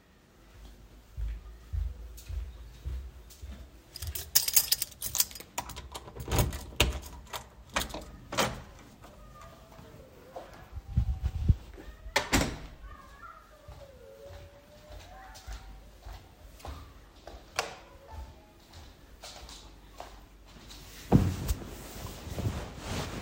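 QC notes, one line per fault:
Nothing stood out on listening to the sound in this clip.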